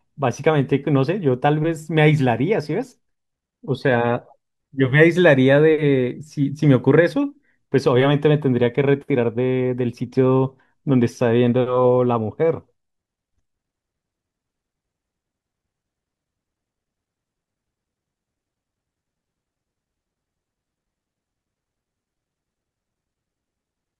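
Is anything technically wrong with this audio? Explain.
No, nothing technically wrong stood out on listening to this speech recording.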